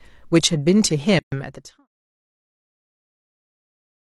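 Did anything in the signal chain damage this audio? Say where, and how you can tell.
Yes. There is a gap at a join of encoded pieces from 1.19 to 1.32 s, a silence of about 132 ms that cuts into continuous speech with abrupt, smeared edges before the sound resumes exactly where it left off. This points to the codec and editing stage: separately encoded segments were concatenated without trimming, so one encoder's start-up delay and the other's padded final frame survive as dead air. It falls within the deliberate fade-out that runs from about 1 s to 1.88 s.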